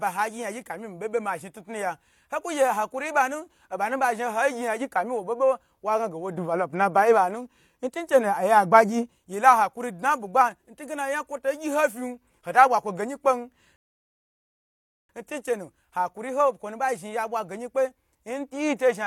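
At 13.76 s, right after "bwa kwo geyin kpen", the speech drops into silence for 1.33 s, ending at 15.09 s. This is a rebuffering stall: playback drained its store of downloaded audio and waited for more data to arrive before continuing. When sound returns with "ntunchenu hakuri ho kwonu", it picks up at exactly the point where it stopped, so no speech is skipped; the gap simply adds 1.33 s to the running time.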